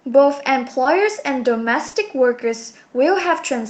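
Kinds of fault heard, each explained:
Short concealed packet loss: 20 ms chunks never arrived, at 0.83 s and 1.87 to 1.95 s, so the decoder patched them, leaving brief smears.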